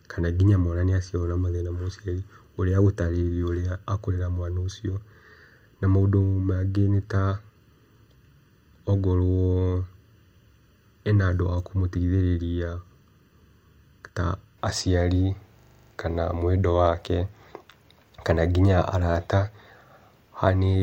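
Speech with two faults. From 0.0 to 14.58 s, just before "aciari kana", channel delay (comb filtering) makes the sound hollow and phasey: one channel lags by under a millisecond, so mono summing carves regularly spaced notches starting around 700 Hz. From 15.6 to 15.92 s, a system hang loop repeats one 40 ms fragment eight times, giving a 25 Hz stutter as the hardware cycled a stalled ring buffer, with little audio lost.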